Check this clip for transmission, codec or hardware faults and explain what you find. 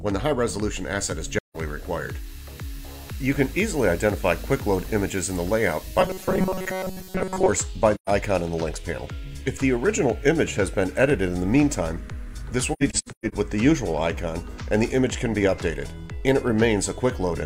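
Yes, there are two kinds of fault. AAC frame loss with muting hits at 1.37–1.56 s, 7.95–8.09 s, and a scattered patch from 12.73–13.34 s (longest gap around 150 ms). The decoder zeroes lost frames, giving soft-faded holes.

Robotic sound from repeated short buffers runs from 5.99 to 7.49 s. It's a rigid metallic buzz at 188 Hz, likely from tiny buffers of about 5 ms being replayed for most of that stretch.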